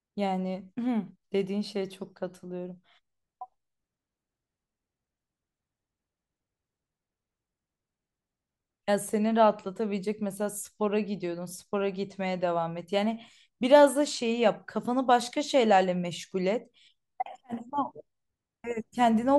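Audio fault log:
No technical fault can be heard anywhere in the speech. Nothing in the recording calls for a timed entry in this log.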